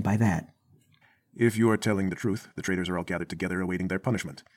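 Speech with a time-stretched section from 2.07 s to the end. The pace jumps abruptly to about 1.47 times faster while the pitch stays put. It sounds rushed. Software likely squeezed the audio to fit a length by dropping short pieces.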